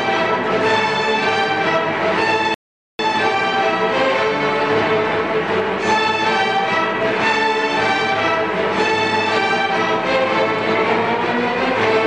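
The audio contains a playback stall: at 2.54 s the sound halts mid-flow and stays silent until 2.99 s, a gap of about 450 ms, before continuing. The likely cause is the player running short of buffered data or having its output thread blocked, so nothing reached the output until it recovered. Unlike a brief packet dropout of a few tens of milliseconds, this is one sustained hole long enough to register as a pause.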